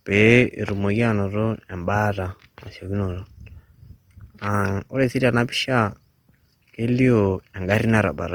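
Throughout, the speech sounds grainy and rough, which points to likely Opus compression at a low bitrate near 24 kbps; a spectrogram shows noise-filled bands reaching 20.3 kHz with few holes.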